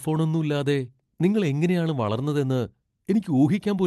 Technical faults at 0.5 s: none

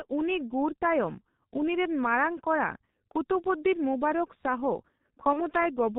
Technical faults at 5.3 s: G.723.1 codec; VoIP packet loss concealed by the speech codec

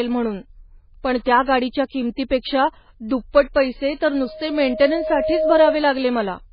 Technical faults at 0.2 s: MP3 compression

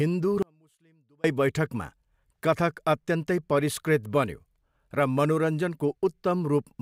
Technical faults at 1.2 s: audio dropout to a faint residue

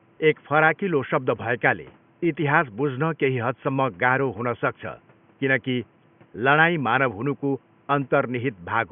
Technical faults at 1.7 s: none

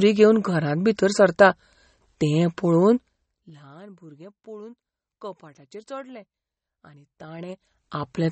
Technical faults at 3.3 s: MP3 compression; zipper noise

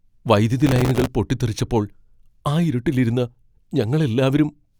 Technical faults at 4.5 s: none

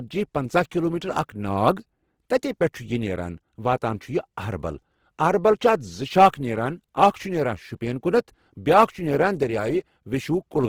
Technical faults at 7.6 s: Opus compression

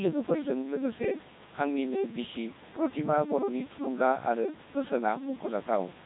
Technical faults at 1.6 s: Codec 2 vocoder

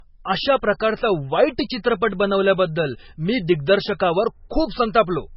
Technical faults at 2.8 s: low-bitrate audio saved at a high bitrate

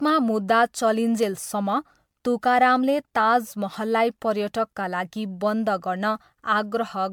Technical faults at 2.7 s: generation loss

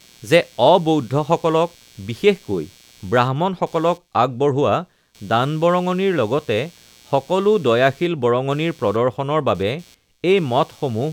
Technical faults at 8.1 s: computer activity noise

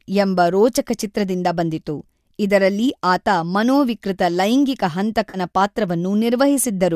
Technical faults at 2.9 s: none

